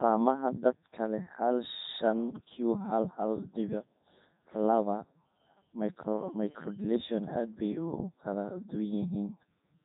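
From start to finish the speech sounds robotic and buzzy, with a thin, synthetic edge and nothing audible above about 3.8 kHz. This is Codec 2 vocoder damage, and it is heavy. Rather than preserving the waveform, the codec reduces the voice to pitch, voicing, energy and a rough spectral shape, and the decoder rebuilds it from sine waves. The character points to its highest-quality 3.2 kbit/s mode.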